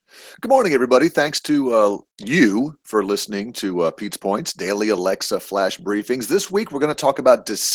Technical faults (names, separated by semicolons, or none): Opus voice compression